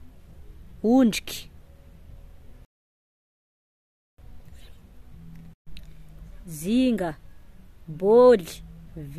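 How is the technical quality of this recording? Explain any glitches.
The speech stops dead at 2.65 s, falls completely silent, and picks up again at 4.18 s from the exact point where it broke off, so nothing is skipped but about 1.53 s of dead air is inserted. That gap is a rebuffering stall: playback consumed all the audio it had downloaded and had to pause until more data arrived. Once the buffer refilled, it resumed seamlessly.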